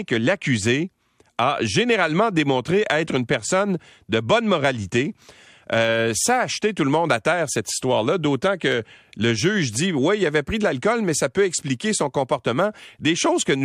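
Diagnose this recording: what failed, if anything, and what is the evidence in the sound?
Listening carefully to the speech, nothing stood out at any point in the recording.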